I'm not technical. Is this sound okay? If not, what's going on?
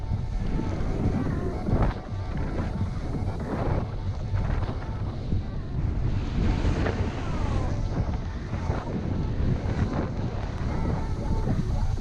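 No. Near the end, from about 10.43 to 10.60 seconds, there's a loud pop. It's actually two sharp pops in quick succession, and they jump out above the rest of the sound. The audio carries on underneath them. A pop like this happens when a sudden jolt of electricity gets into the recording. The likely cause is a cable being plugged in, a switch being flipped, or a burst of static.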